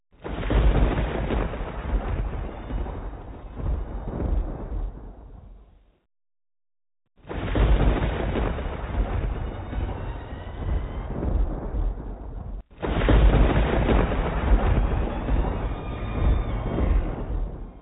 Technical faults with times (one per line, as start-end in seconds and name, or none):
none